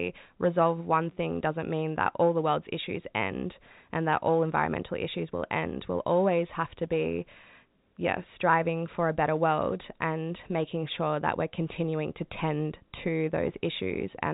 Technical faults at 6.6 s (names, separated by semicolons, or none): none